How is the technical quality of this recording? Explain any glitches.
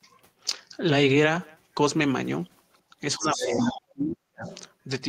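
The recording is marred by echo-canceller trouble in its second half.

Speech suppressed in double talk shows up as a brief dip around 2.90 to 2.96 s and a deeper, broken loss from 3.16 to 4.47 s, falling roughly 40 dB at worst. The likely cause is the canceller muting the talker while the far side spoke. The waveform shows gouged, hollow stretches.

The other side's voice leaking through appears from 3.19 to 3.8 s, about 10 dB below the talker, and faintly from 4.44 to 4.62 s. It is likely loudspeaker echo that the canceller left in the microphone signal. On a spectrogram it shows as a second set of harmonic traces underneath.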